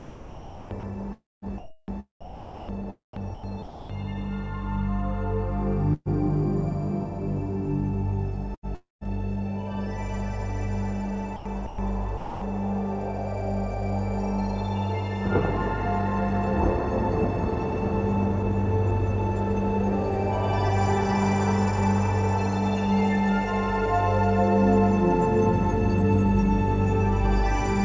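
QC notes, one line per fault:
0.00–3.89 s, 8.55–9.08 s, 11.36–12.41 s, sound chopped by the voice detector: likely sender-side gating swapped about 2.2 s, 0.34 s and 0.45 s for comfort noise, so audio drops choppily into synthetic hiss.
5.93–6.09 s, burst of packet loss: about 120 ms never arrived; the receiver stretched and faded the last sound, then 40 ms of silence, and playback resumes with that stretch missing.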